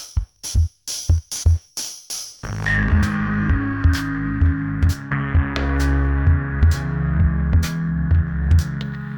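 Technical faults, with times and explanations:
3.03 s, damaged data in a compressed stream: a stretch of the encoded bytes here is corrupt, so the decoder misreads or rejects those frames, loses sync and hunts for the next valid frame header, leaving a brief garbled blip where the broken frames should have played.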